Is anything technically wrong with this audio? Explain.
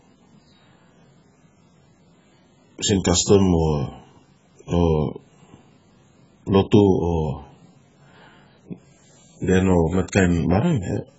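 Yes. Throughout, heavy AAC compression, likely AAC-LC at a bitrate near 12 kbps, removes everything above 7.6 kHz and starves bands, leaving speech dull, smeared and warbly on sibilants.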